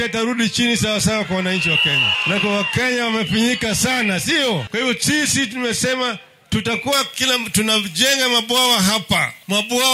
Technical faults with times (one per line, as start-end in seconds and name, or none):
6.93-9.94 pre-emphasis left on